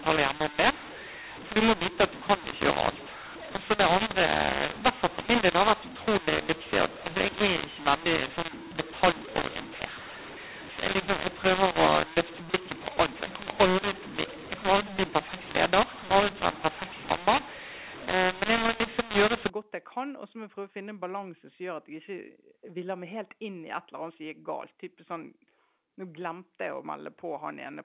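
From the start to 19.5 s, the speech suffers a mu-law and A-law mix-up. The audio was coded with G.711 A-law but decoded as mu-law. Each 8-bit code is read against the wrong logarithmic curve. Some levels come out too loud, others too soft. The quietest samples jump well above silence. The speech sounds harsh and gritty, and pauses fill with hiss. The fault ends just before "godt jeg kan". From there the A-law path decodes correctly.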